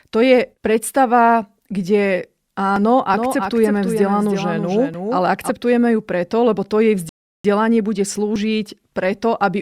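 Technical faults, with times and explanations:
2.76 s, 4.94 s and 8.36 s, dropped buffer (overrun): each is a small forward jump, about 15 ms of sound missing, likely because samples were overwritten before being read.
3.14–5.50 s, doubled audio track: a dry full-band copy trails about 300 ms behind, roughly 5 dB quieter, starting and stopping abruptly, likely a second capture path mixed in.
7.09–7.45 s, rebuffering stall: the sound cuts to silence and resumes exactly where it stopped, adding 353 ms while playback waited for more downloaded data.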